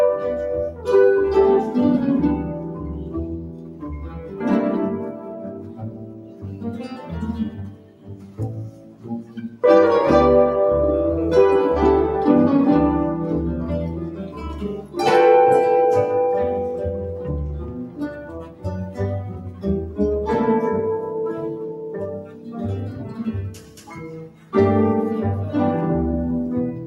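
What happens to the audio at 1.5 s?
At 1.5 s, as throughout, a noise suppressor applied to music or sounds treats sustained tones and tails as noise, pulling them down around 10 dB so the sound pumps.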